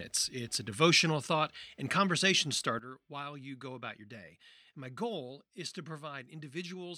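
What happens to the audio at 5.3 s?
At 5.3 s the audio sits inside a sudden gain jump that began at 2.79 s and lasts to the end: the level dropped by about 11 dB from one sample to the next, likely a gain setting applied without a ramp. Unlike a fade or compressor action, the speech and background noise fell together in a single step.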